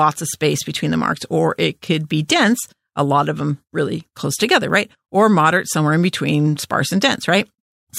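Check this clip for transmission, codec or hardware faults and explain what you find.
One codec fault is present: pre-echo at 2.28 s. A short hiss arrives about 11 ms ahead of a sharp attack, roughly 16 dB above the quiet before it. That points to a transform codec holding long blocks of about 26 ms rather than switching to short ones. Noise meant for the loud onset spreads backwards through the block, so the speech attack sounds smeared.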